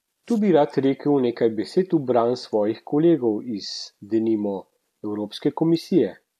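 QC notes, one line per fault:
No faults noted on the speech track.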